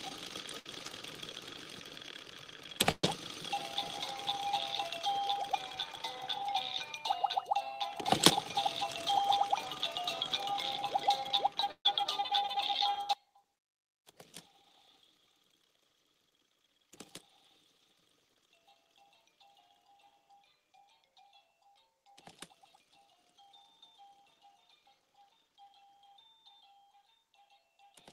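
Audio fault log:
0.59–0.67 s, 2.91–3.05 s and 11.71–11.87 s, burst of packet loss: Each time a short run of audio never arrives, so the receiver stretches the last sound it had and lets it fade. The first gap is bridged for about 56 ms. The second and third are bridged for about 123 and 135 ms, and the fill dies to silence for roughly the last 50 and 90 ms. Playback then resumes about 60, 120 and 140 ms further on, skipping that audio.
13.13 s to the end, one channel inverted: The level abruptly drops by about 28 dB, leaving only a faint remnant of the sound for the rest of the clip. The likely cause is one stereo channel having reversed polarity. When the two channels are summed to mono, everything common to both cancels, and only the small difference between them survives. That matches a near-total loss of the centred, full-bodied content.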